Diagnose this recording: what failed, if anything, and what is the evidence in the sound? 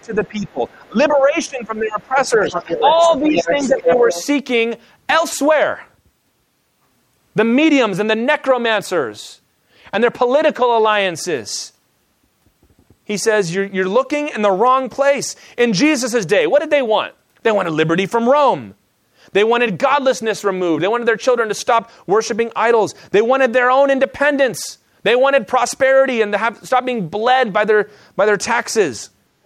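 Speech suppressed in double talk, at the call-processing stage, during the first four seconds: 0.00 to 0.62 s, 0.88 to 2.39 s and 3.19 to 3.89 s. The speech dips by roughly 10 to 15 dB in uneven pieces. The likely cause is an echo canceller that could not separate the near talker from loudspeaker echo during overlapping talk and attenuated everything. On a waveform the envelope shows abrupt notches. A spectrogram shows bands thinning.

Other side's voice leaking through, also from call processing. There is a faint scrap at 0.47 to 0.51 s, roughly 40 dB below the speech and barely visible. Longer, much stronger stretches run from 2.44 to 3.18 s and from 3.35 to 4.25 s, only about 5 dB under the speech. This is likely residual far-end echo that the canceller failed to subtract. On a spectrogram it appears as a second, independent harmonic pattern overlapping or immediately following the suppressed regions.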